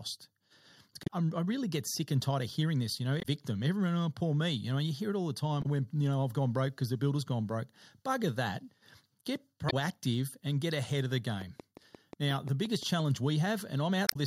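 Short chirps and blips break into the speech at 1.03–1.10 s (just before "I really get sick"), 3.18–3.25 s, 5.59–5.66 s (between "hear it all the" and "you know I've gone") and 9.67–9.73 s. This is damaged data in a compressed stream: corrupted frames are misread, the decoder loses sync and skips forward to the next valid frame header.

From 11.42 to 13.01 s, right after "get ahead of the", a train of clicks ticks steadily at about 5.7 per second, around ten clicks about as loud as the speech. These evenly spaced, similar pulses are likely interference or a faulty connection injecting them.

A final blip of damaged compressed data follows at 14.05–14.16 s.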